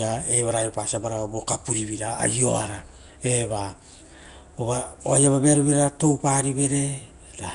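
From start to finish the speech carries a rough, hissy halo and a smeared, underwater blur, with nothing above 10.6 kHz. This is likely Nellymoser compression, Flash's old microphone codec, and the damage fits a rate near 44 kbps. Bands too weak to earn bits are replaced with noise, so the hiss tracks the speech itself rather than sitting steady underneath. That separates it from MP3's metallic, swirling warble and from simple band-limiting, which dulls without adding grit.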